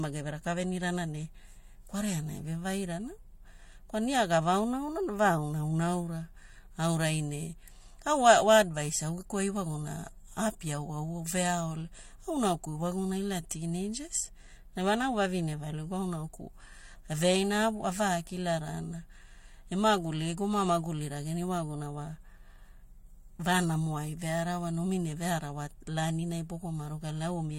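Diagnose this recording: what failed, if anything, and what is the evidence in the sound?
Codec stage: the speech was likely transcoded between lossy codecs, MP3-like then HE-AAC, so both codecs' artefacts stack throughout, with nothing above 16.2 kHz.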